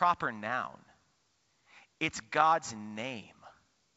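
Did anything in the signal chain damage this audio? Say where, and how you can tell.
No, nothing in the signal chain stood out as damaging this speech on listening, with the room's background noise sitting about 50 dB below the voice and the G.722 wideband coding adding nothing more than a faint upper-band hiss at most.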